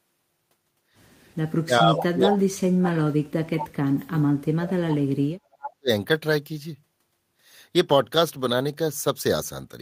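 From 1.64 to 4.23 s the speech repeatedly dips and cuts out, by roughly 40 dB at worst and for about two seconds in total. This is speech suppressed in double talk, likely because an echo canceller mistook overlapping talk for echo and turned it down. Within that stretch, at 1.94–2.05, 2.30–2.37 and 3.59–3.66 s, brief delayed copies of the voice surface about 394 ms late, at roughly 10, 5 and 10 dB below the speech. A longer scrap follows at 5.52–5.73 s, about 15 dB down. This is echo leak, likely from a loudspeaker's sound getting past the far end's canceller. The speech briefly drops out again at 5.79–5.89 s, another short double-talk suppression.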